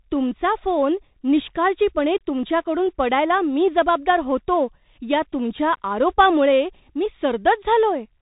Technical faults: Bluetooth CVSD headset codec

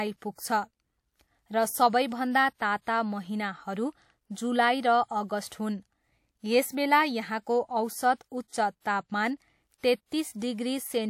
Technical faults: pre-echo

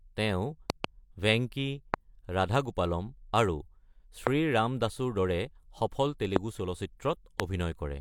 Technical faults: loud pop

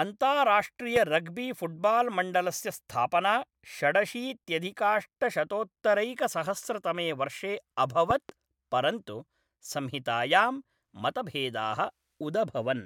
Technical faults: loud pop

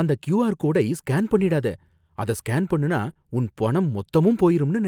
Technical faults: lost packet rebuilt from error correction; short concealed packet loss

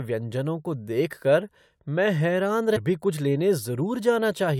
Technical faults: stream segment skipped

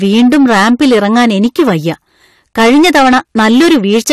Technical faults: hard clipping

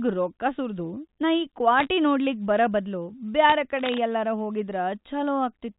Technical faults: bit errors on a digital phone line; cable scratch noise

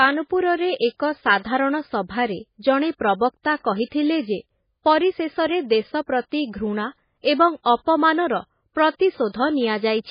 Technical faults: MP3 compression

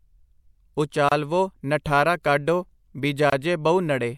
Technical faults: gap at a join of encoded pieces

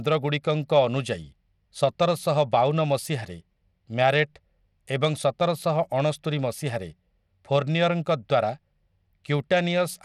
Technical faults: Bluetooth SBC compression

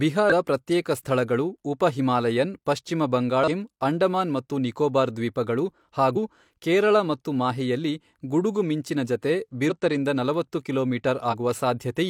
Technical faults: damaged data in a compressed stream

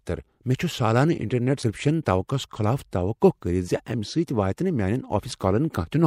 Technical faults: damaged data in a compressed stream

